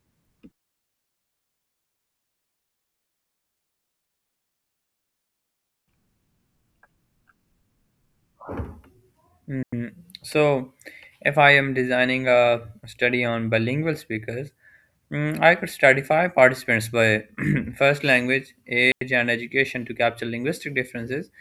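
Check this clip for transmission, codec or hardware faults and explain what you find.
Two brief gaps of near silence break the speech, the signature of a digital wireless dropout. The first runs from 9.63 to 9.73 s, about 96 ms long; the second from 18.92 to 19.01 s, about 95 ms, falling between "first language" and "and education to capture". Each sounds like a clean hole with no crackle or noise burst on either side. The receiver lost too much data from the radio link and muted itself behind a very short fade until the stream recovered.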